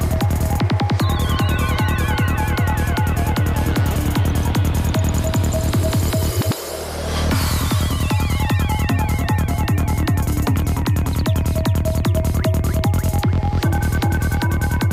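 From 8.98 s to the end, a hiss-like roughness rides on loud, bright passages: sample clock jitter, a clock wobbling by a few microseconds, leaving errors about 30 dB below the signal.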